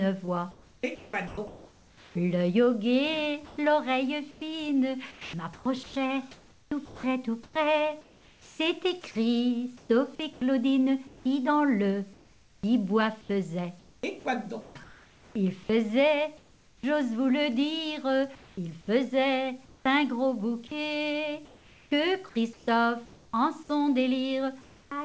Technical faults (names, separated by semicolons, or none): sound chopped by the voice detector; comfort noise in place of the background; onset clipped by the voice detector